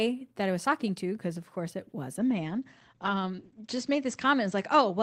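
From 2.19 s to the end there's a call bitrate drop. The encoder gets squeezed from 32 kbps to 14 kbps, bottoming out for 1.59 s, and the top end shrinks from 20 kHz to 8 kHz, so the speech goes muffled.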